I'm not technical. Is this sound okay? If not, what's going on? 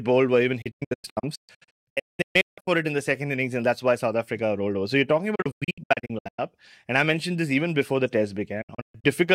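No. Digital broadcast dropouts hit at 0.62 to 2.68 s (after "bowled were even", back by "it in the second"), 5.35 to 6.39 s (after "you're talking"), and 8.62 to 9.14 s (after "even before the test"). The receiver lost good data and briefly muted, so the speech breaks into short silent holes, each up to about a fifth of a second. Nearly 1.4 s goes missing in the first stretch. Whatever was said during those gaps is gone.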